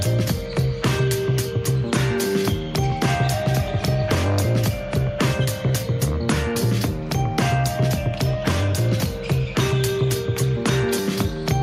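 No audible faults anywhere in the clip.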